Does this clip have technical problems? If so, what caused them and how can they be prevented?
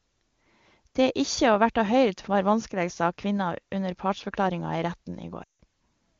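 Yes. From 5.43 to 5.58 s the speech drops to near silence within two frames, then returns weak and rough. These are lost AMR speech frames: radio errors broke a run of frames, about 160 ms, which fits eight 20 ms frames, and the AMR-WB decoder padded the gap by repeating its last pitch and vocal tract settings with falling gain. A stronger radio link or more robust channel coding would prevent it.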